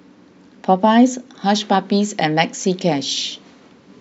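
No technical faults are audible anywhere in the recording.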